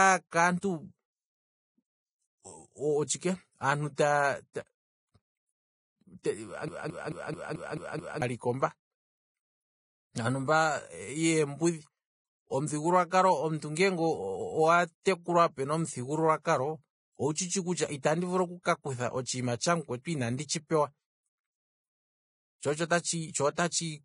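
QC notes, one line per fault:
Throughout: Vorbis compression. The speech sounds hissy and grainy, with roughened tones and softened consonant attacks, and nothing remains above 10.6 kHz. This is likely low-quality Vorbis coding, near 22 kbps, quantising the treble so coarsely that detail turns to noise.
6.68–8.22 s: broken-record loop. A 218 ms fragment repeats exactly, back to back, seven times, and the speech that belonged in that stretch is missing. The likely cause is a player, encoder or stream stalling and resending the last piece it held.
15.03 s: pre-echo. A brief hiss of about 31 ms smears in just before the attack of "pena omuthigululwa kalo owu", softening its onset. The transform codec spread noise sized for the loud attack across the quiet moment ahead of it in the same block.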